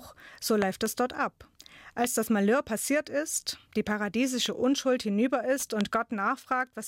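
Loud pops interrupt this speech clip: two in quick succession between 0.62 and 0.88 s, then single ones at 2.04–2.06 s, 4.46–4.48 s and 5.81–5.83 s, each roughly 15 dB above the speech. Each is likely a sudden voltage pulse from a plug, switch or static, added on top while the speech continues underneath.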